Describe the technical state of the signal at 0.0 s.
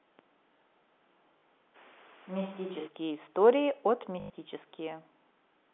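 At 0.0 s the audio is intact, carried over ordinary G.711 telephone coding with its narrow telephone band and no fault present.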